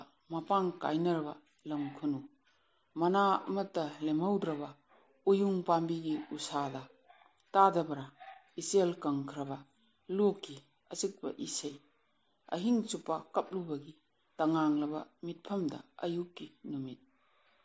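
No technical faults can be heard anywhere in the audio; the signal stays continuous and steady throughout.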